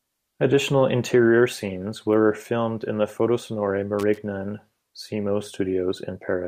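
At 3.99 to 4.18 s the speech is broken by loose connector crackle: a worn contact rapidly making and breaking, chopping the signal. Its irregular scratchy burst separates it from a single clean digital click or dropout.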